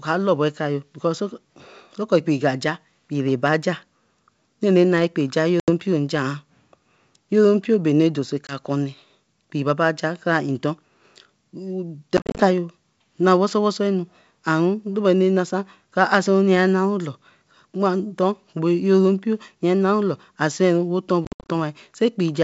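Packet loss on an ADPCM call: dropped packets became silent gaps, and the decoder's predictor and step size drifted from the sender's, so speech resumes with brief, slight distortion. The gaps fall at 5.60 s (80 ms), 8.47 s (20 ms), 12.17–12.48 s (140 ms scattered over 220 ms) and 21.25–21.50 s (190 ms over 240 ms).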